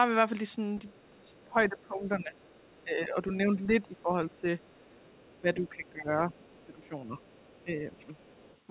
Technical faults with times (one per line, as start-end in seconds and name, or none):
0.77-2.84 other side's voice leaking through
0.87-4.46 speech suppressed in double talk
3.98-4.02 other side's voice leaking through
4.60-7.64 other side's voice leaking through
5.41-8.13 speech suppressed in double talk
8.17-8.59 other side's voice leaking through